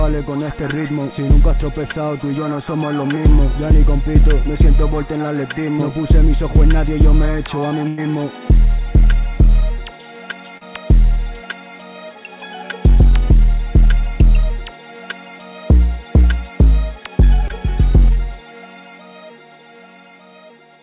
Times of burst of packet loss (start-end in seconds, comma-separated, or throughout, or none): 7.88-7.99